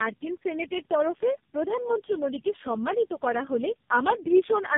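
Tandem speech coding runs throughout: three low-rate speech codecs in series, consistent with GSM then AMR-NB, each recoding its predecessor's damage into rough, muffled, warbly speech; spectrogram shows nothing above 3.6 kHz.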